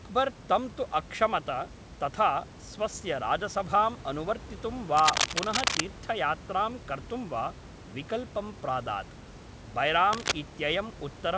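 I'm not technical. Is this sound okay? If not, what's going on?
No, there are two bursts of cable scratch noise, a rough scratching about as loud as the speech, from 4.97 to 5.81 s and 10.13 to 10.32 s, likely from a worn cable being moved.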